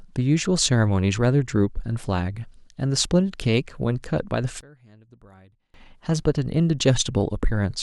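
Speech recording in which one channel was likely inverted in polarity from 4.61 to 5.74 s, so summing to mono cancels the shared centred voice, dropping it by about 28 dB to a faint residue.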